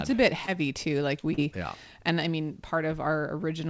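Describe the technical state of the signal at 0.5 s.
Right after "a bit", from 0.46 to 0.49 s, there is short concealed packet loss. A few hundredths of a second of audio arrived too late, which fits a gap of about 20 ms. The decoder extended the preceding sound and blended back, leaving a brief smear.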